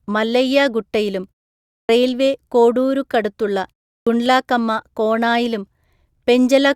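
Clipped start after a pause at 1.78 s, after "മല്ലയ്യ ഗുട്ടയിലും", and at 3.96 s, before "ഗുണ്ട്ലാകമ്മ കോണായിലും": the output wakes late from silence, chopping about 0.11 s off each onset.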